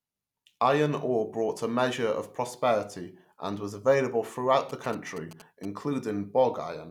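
From 4.69 to 5.65 s, after "and was available throughout", GSM signalling bursts appear. A nearby phone's radio pulses are rectified, giving a galloping dit-dit-dit of short 217 Hz buzzes, roughly 20 dB below the speech.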